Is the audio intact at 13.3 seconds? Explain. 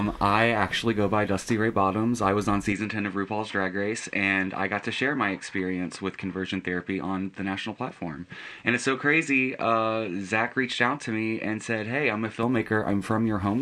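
Yes, at 13.3 seconds the audio is intact, with no dropout, click, distortion or other fault at that point.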